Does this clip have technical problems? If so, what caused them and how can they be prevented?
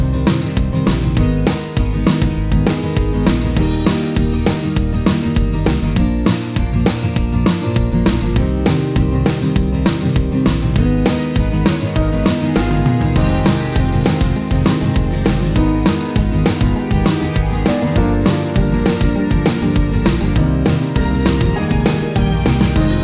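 No, the signal holds steady throughout, with no audible technical faults that would need a cause traced or a preventive step.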